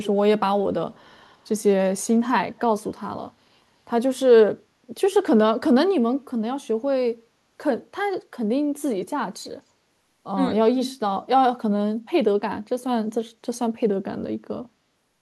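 From 0.93 to 1.43 s a faint delayed copy of the speech, an echo leak, trails the original by about 235 ms, very quiet beneath it. The likely cause is a far-end loudspeaker whose echo canceller let some pickup return. Unlike room reverberation, it repeats distinctly rather than smearing.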